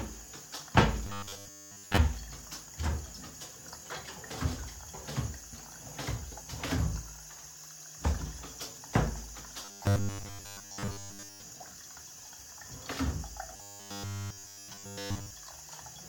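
From 1.07 to 1.97 s, 9.65 to 11.42 s and 13.57 to 15.31 s, the sound turns robotic, a rigid 100 Hz buzz. This is likely from repeated short buffers, with a 10 ms slice looping over most of the audio, and nearly all of it in the last stretch.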